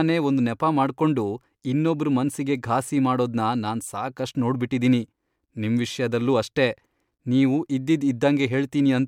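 No technical faults can be heard anywhere in the recording.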